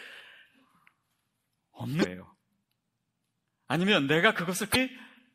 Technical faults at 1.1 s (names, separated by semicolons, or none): MP3 compression